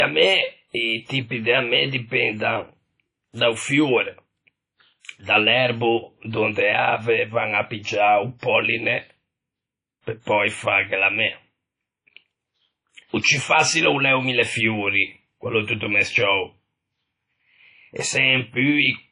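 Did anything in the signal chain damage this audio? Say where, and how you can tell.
Yes: at the codec stage, likely WMA compression at around 32 kbps, block coding smears the speech into ringing, breathing hiss throughout and cuts everything above 10.1 kHz.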